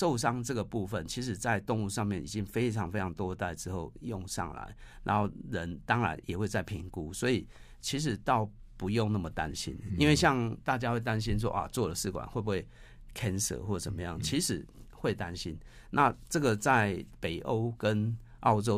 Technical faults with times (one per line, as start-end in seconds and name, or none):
none